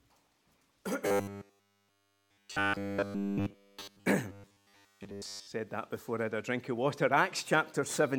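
From 1.08 to 4.07 s and 4.32 to 5.47 s, robotic sound from repeated short buffers: a fixed 100 Hz metallic buzz, likely 10 ms chunks looped, without dropout gaps.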